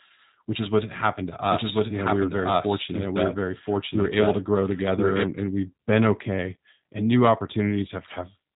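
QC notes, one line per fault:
throughout G.729 codec. The speech is rebuilt from a model of the vocal tract, a pitch predictor and a few sparse pulses. Nothing above 3.8 kHz survives, so it sounds narrow. The rough, synthetic grain is plainly audible and fits an 8 kbit/s VoIP stream.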